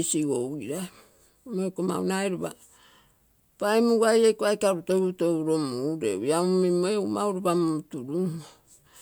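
A speech recording with no audible technical fault. There is nothing here that needs a time or a cause.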